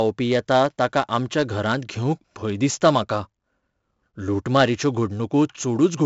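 Right from the start and all the way through, this speech carries 4-bit ADPCM compression, and it's heavy. Each sample is coded as a small step off a prediction, so a gritty hiss rides on every loud syllable. Nothing survives above about 7.7 kHz, which fits a 16 kHz rate at 64 kbps.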